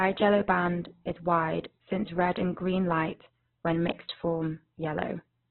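Throughout, the speech sounds boxed-in, grainy and rough, with nothing above about 4.1 kHz. This is likely Opus compression in its music mode at a very low rate, near 8 kbps, narrowing the bandwidth and filling starved bands with noise.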